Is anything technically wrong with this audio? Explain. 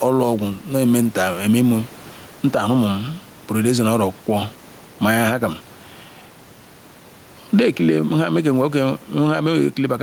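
Yes. Gain pumping runs through the whole speech clip. The gain swings by roughly 10 dB, likely from a fast limiter riding excessive input gain, and the room background sits about 31 dB below the speech.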